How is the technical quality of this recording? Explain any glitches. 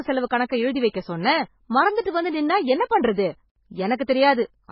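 Technical quality is poor. Heavy codec damage runs through the whole speech clip, and one audible glitch is caused by it.

MP3 compression, present throughout, is the likely cause of the dull, watery sound. The encoder ran short of bits, which fits a bitrate as low as 16 kbps. It removed everything above 5.5 kHz and left weak frequency lines flickering between frames, so sibilants turn swirly and metallic.

Pre-echo occurs at 2.89 s, just after "வந்து நின்னா என்ன". A sharp onset fell late in a transform block, and the quantisation noise meant for it spread across the block, about 16 ms ahead of the attack. The result is a brief hiss before the onset, which sounds softened and smeared.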